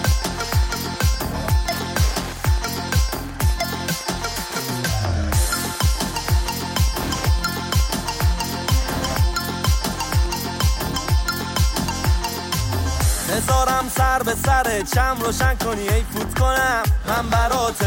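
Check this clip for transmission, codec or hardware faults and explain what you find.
There is one fault, Wi-Fi interference, from the start to 10.92 s. A nearby Wi-Fi radio's beacon bursts are picked up and rectified by the audio circuitry, leaving a dry tick every 102.4 ms, just under ten per second, sitting roughly 20 dB below the audio. That slow, even ticking separates it from GSM buzz, whose 217 Hz bursts run together into a continuous rasp, and from mains hum, which is a steady tone rather than separate clicks.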